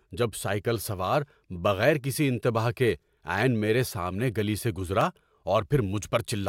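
A block of digital silence occurs at 1.30 s, between "جب سائیکل سوار" and "بغیر کسی انتباہ کے", and again at 5.01 s, just after "میرے سامنے گلی سے". In each, a run of samples, 0.73 ms and then 1.45 ms long, drops abruptly to silence and back. Each gap is so short that it comes across as a tick or dip in the speech.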